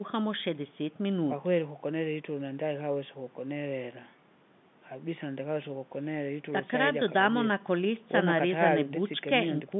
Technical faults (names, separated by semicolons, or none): none